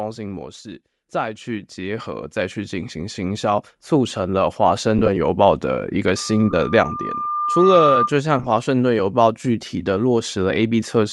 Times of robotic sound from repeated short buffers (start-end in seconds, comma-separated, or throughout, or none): none